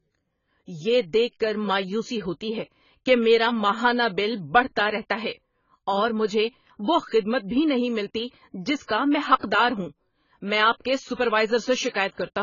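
Throughout the speech nothing sounds above 7 kHz, leaving it dull, smeared and warbly. That is likely heavy AAC compression, fitting a very low bitrate near 16 kbps, not simple low-pass filtering. At 9.40 to 9.43 s (35 ms) and 11.89 to 11.94 s (51 ms), pre-echo adds short hiss before each attack: codec noise spread backward, unlike reverb, which follows.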